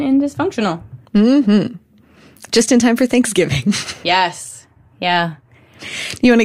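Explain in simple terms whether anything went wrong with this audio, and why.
Nothing went wrong: no technical fault is audible anywhere in this speech recording.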